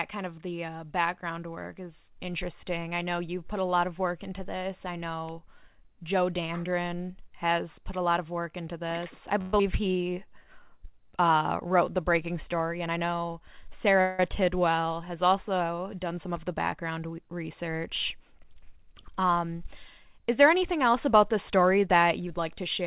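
A speech clip carried over a call link, with nothing above 4 kHz, which fits G.711 mu-law at 64 kbps. Just after "work into this I", a long network dropout runs from 9.41 to 9.60 s. The last sound is stretched into a fading buzz or hiss for about 180 ms, and about 80 ms of speech is likely lost. A jitter buffer slow-down follows from 9.81 to 10.46 s. Repeated pitch periods add 89 ms, so the speech plays at 87% speed at the same pitch. Jitter buffer speed-up occurs three times. The first is from 12.86 to 13.95 s, after "wrote the breaking story", at 108%. The second is from 16.14 to 16.99 s, after "has also", at 109%. The third is from 21.54 to 22.38 s, at 109%. Trimmed pitch periods remove roughly 100, 100 and 70 ms respectively, and the speech sounds hurried. A call audio freeze from 14.01 to 14.20 s fills 177 ms with a fading buzz or hiss. The speech then resumes where it stopped, with nothing missing, likely because packets were held up and the buffer ran dry.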